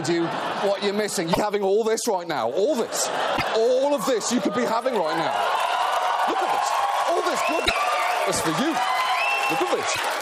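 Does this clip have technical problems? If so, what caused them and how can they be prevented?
Yes. The clip has damaged data in a compressed stream at 1.29–1.38 s, 3.33–3.43 s, 7.62–7.71 s and 9.92–9.99 s, each lasting roughly 70 to 100 ms. Corrupted bytes make the decoder misread or reject frames and hunt for the next valid header, producing an abrupt disruption in the sound. On a spectrogram each appears as a sharp vertical break against the surrounding texture; the waveform shows a sudden discontinuity. Prevent it by transferring and storing files with checksums or error-protected transport.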